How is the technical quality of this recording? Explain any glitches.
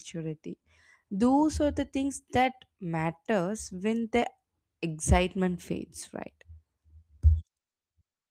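No glitches come through in this speech recording. The Opus voice compression keeps the full band with only light coding texture, consistent with hybrid SILK and CELT at a moderate rate around 24 kbps.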